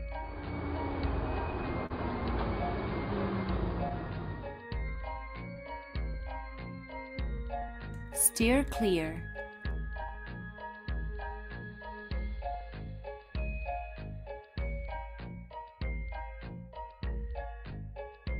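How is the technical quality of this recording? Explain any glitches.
The recording has audible timing faults: one brief stall near the start, then a recurring run of small hiccups caused by mismatched clocks.

Clock drift between sender and receiver runs through the whole clip as small, unevenly spaced hiccups. The sender's clock runs about 3 percent slow, so the receiver's jitter buffer keeps draining.

A short stall from a late packet occurs from 1.86 to 1.92 s. A sound is held about 37 ms too long, with a slight buzz or dip. The packet arrived late, the buffer ran empty, and the receiver stretched the last sound. Nothing was lost.

Repeated timing corrections run from 3.44 to 18.13 s, heard, if at all, as slight hiccups or an unsteady tempo. The receiver keeps repeating short pieces, playing at 97 percent speed and adding roughly 0.4 s overall.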